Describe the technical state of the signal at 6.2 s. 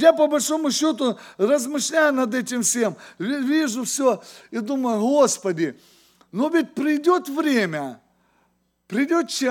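At 6.2 s the speech signal is intact, with no audible dropout, distortion, clipping or other fault at that point.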